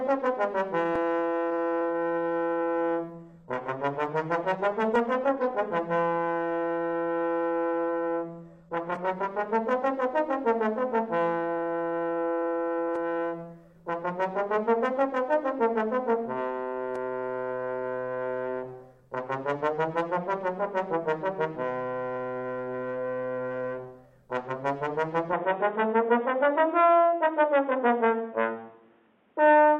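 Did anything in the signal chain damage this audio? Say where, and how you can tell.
Yes. At the network and codec stage, an adaptive stream at a lower bitrate took over from 3.13 to 9.13 s. Nothing above 12.2 kHz survives, the treble drops, and artefacts rise abruptly with no gap, consistent with a drop from roughly 96 to 16 kbit/s.

At the input stage, from 25.33 s to the end, the band suddenly stops at 3.8 kHz and the sound goes dull. There is no silence and no level change, but a new noise floor appears, roughly 40 dB down. This likely reflects the input switched to a poorer device.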